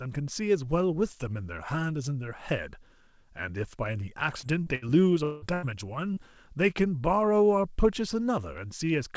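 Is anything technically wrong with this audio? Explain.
Yes, the middle of this speech clip has a cluster of network faults between about 4.4 and 6.2 s, heard through a call path whose band stops at 8 kHz, which fits a wideband G.722 codec.

Short concealed packet loss occurs at 4.40, 4.63 and 6.13 s. Each time about 30 ms of audio failed to arrive, and the receiver bridged the gap for 25 to 31 ms by extending the preceding sound. It is heard as a quick smear or wobble. On a spectrogram, harmonics run briefly flat and blurred, and the waveform shows a smooth, repetitive patch.

A burst of packet loss happens at 4.75 to 4.85 s and again at 5.54 to 5.65 s. About 60 ms and then 90 ms went missing, and the receiver filled them with 64 ms and 86 ms of continued sound that fades. The result is a held buzz or fading hiss, and the speech then jumps ahead. The spectrogram shows frozen, dimming bands, and the waveform shows a shrinking envelope.

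From 5.24 to 5.45 s, 180 ms of audio is replaced entirely by a synthetic continuation that decays, with no silent stretch. The likely cause is a long network dropout. The listener hears a drawn-out buzz or hiss that decays, and the speech then resumes further on. On a spectrogram, smeared static harmonics fade out, and the waveform shows a smoothly tapering envelope.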